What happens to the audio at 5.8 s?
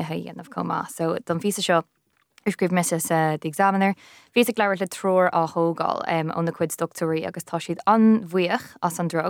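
Nothing goes wrong at 5.8 s; the speech carries on intact through that moment.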